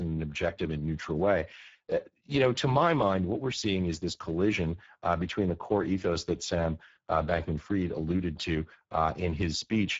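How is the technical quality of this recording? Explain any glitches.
The quality's pretty rough, mostly down to one problem running the whole way through: Speex codec damage. From start to finish the speech sounds hoarse and grainy. That fits Speex at a low bitrate, somewhere around 10 kbps, where the codec has too few bits to rebuild the voice's excitation properly. Nothing comes through above 7.7 kHz.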